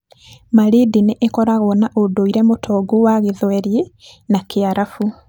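No technical faults can be heard anywhere in this speech recording.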